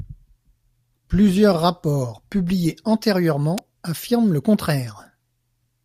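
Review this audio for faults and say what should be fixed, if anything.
At 3.58 s there's a sharp snap riding over the speech, an electrical switching spike, peaking around -10 dBFS. It's likely a nearby switch, motor or static discharge arcing, with the audio line picking up that brief burst. To prevent it, keep cables away from switching gear and use balanced, well-shielded runs.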